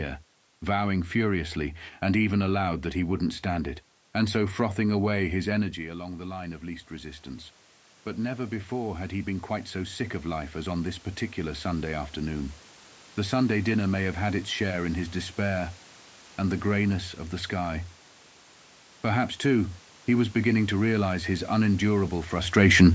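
Speech over a call microphone, with content topping out around 8 kHz, shows automatic gain rising from 5.74 to 12.63 s, just after "so frothing away his". Around 5.5 s the talker moves away and the input drops by about 11 dB. The gain control then climbs about 10 dB over roughly seven seconds. Unlike a talker simply moving closer, the room noise swells right along with the voice, which means the gain changed, not the source.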